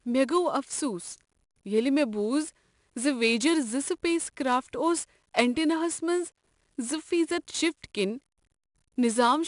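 Speech clip with 4-bit ADPCM compression throughout: a gritty hiss rides on every loud stretch and rises and falls with the level, and nothing is heard above 10.6 kHz, which points to a roughly 89 kbps, 22 kHz stream.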